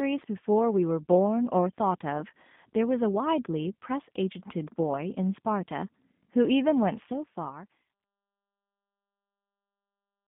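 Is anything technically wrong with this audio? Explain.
Yes. G.729 codec damage runs through the whole speech clip: the sound is squeezed into a narrow telephone band of roughly 150 Hz to 3.6 kHz, which fits an 8 kbit/s G.729 coder rebuilding each 10 ms frame from a vocal tract filter, a pitch predictor and a few pulses. The result is plainly rough, buzzy and slightly synthetic.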